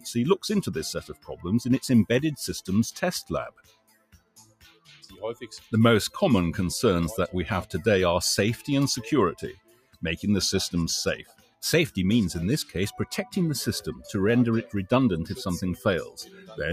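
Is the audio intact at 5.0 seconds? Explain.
No. Sound cut by the noise suppressor spans 3.5 to 5.22 s. The suppressor mistook this sound for noise and pulled it down by up to about 21 dB, so it sinks or its decay is clipped short.

Underneath, a noise suppressor applied to sounds runs throughout. A speech-oriented suppressor treats sustained tones and tails as noise, so levels swing by roughly 15 dB, pumping and thinning the audio.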